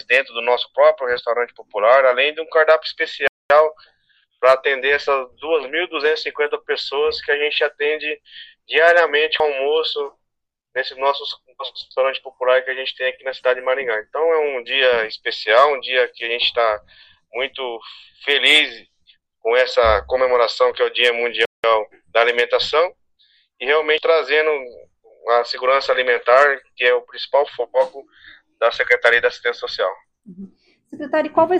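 At 1.16 to 1.19 s a corrupt FLAC frame disturbs the sound: wrong prediction values run from the damaged bit on, then the next frame plays clean, unlike the silences later. From 3.28 to 3.50 s, and again from 21.45 to 21.64 s, the sound drops to silence for 226 ms and 185 ms, then resumes where it stopped. These are playback stalls, likely from the player running short of data, and unlike skips, nothing is lost. At 9.40 s about a fifth of a second of audio, and at 23.98 to 24.07 s about a tenth, is missing. These are compressed frames skipped: the audio jumps ahead with a hard click rather than silence.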